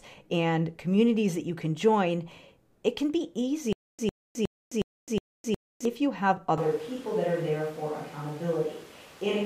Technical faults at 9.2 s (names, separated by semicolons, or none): switch to a distant microphone